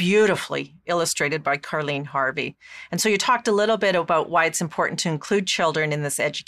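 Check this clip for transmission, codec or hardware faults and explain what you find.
Nothing found: no audible fault anywhere in the speech.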